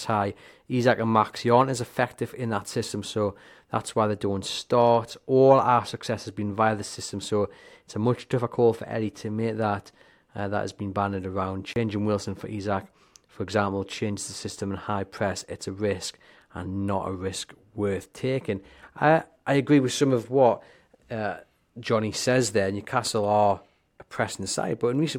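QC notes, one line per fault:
3.76–25.18 s: channel delay (comb filtering). The top end sounds dulled because one channel lags by a tiny delay, about one sample, and summing to mono cancels the highs near 20 kHz.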